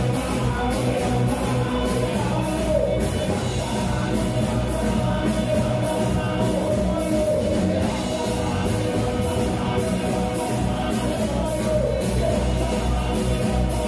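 No technical fault can be heard anywhere in this recording. The signal holds steady throughout, with nothing in it that calls for a technical explanation.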